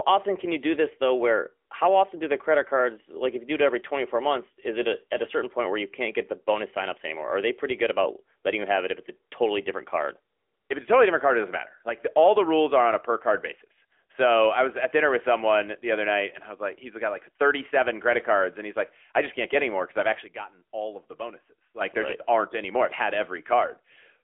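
Across the whole recording the speech sounds boxed-in and buzzy, with a synthetic, reedy edge and nothing above about 3.6 kHz. This is the AMR narrowband mobile codec. The signal is squeezed into a 300 to 3400 Hz telephone band and rebuilt from a vocal-tract model fed a few pulses per subframe. The clearly audible damage fits AMR-NB running at a middling rate of about 10.2 kbps.

At 11.89 s, just after "card it doesn't matter", the level drops abruptly by about 6 dB until 12.00 s and returns before "the all the rules". Voice and background fall together, with no fade. From 20.24 s to 21.81 s, after "any more because i've", a deeper drop of about 12 dB lasts until "there right just aren't". Each is a sudden gain jump, likely a digital gain change applied in a single sample without a ramp.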